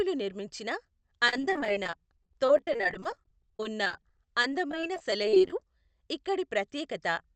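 Speech that turns choppy and robotic from 1.27 to 5.62 s. That's repeated packet loss (robotic sound): dozens of short holes, none longer than about 37 ms, each patched by stretching the last sound, so roughly a fifth of that stretch is concealment. It all comes through a call path band-limited to 8 kHz.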